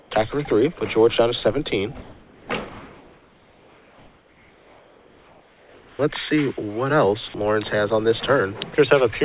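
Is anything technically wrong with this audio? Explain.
Yes. The pauses are filled with synthetic noise, one entry is cut short, and two brief stretches of sound vanish.

Comfort noise in place of the background appears at 0 to 0.11 s, 2.03 to 2.48 s, and 2.69 to 5.99 s. In each gap, the real background, which sits about 29 to 33 dB below the loud parts, turns into a smooth, detail-free hiss about 2 to 3 dB quieter. This is likely discontinuous transmission: the sender stopped sending during these gaps, and the receiver generated shaped noise to cover the silence.

An onset clipped by the voice detector occurs at 5.9 to 5.99 s. The sound returns abruptly, with its first 90 ms missing and its soft attack gone, and the featureless noise runs right up to the hard start. The likely cause is that the sender's voice detector was late to notice the sound resuming, so that opening stretch was never transmitted and the filler noise played instead.

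Sound dropped by the voice detector occurs at 7.28 to 7.34 s and at 8.75 to 8.78 s. In these moments, real sound briefly gives way to the steady hiss for 60 ms and 30 ms, erasing about 40 ms and 20 ms of actual content. The likely cause is that the detector mistook quiet material for background and paused transmission until it triggered again. These drops happen over audio that has no content above 4 kHz, which points to a narrowband G.711 call path.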